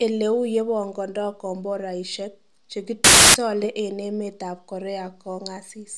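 At 3.04 s the speech is cut by a burst of very loud white noise lasting about 0.3 s, ending at 3.34 s. This is file tags played as audio: an embedded cover picture, stored as compressed image data, has been decoded as if it were samples. Compressed bytes are close to random, so they come out as very loud broadband static, switching on and off with hard edges.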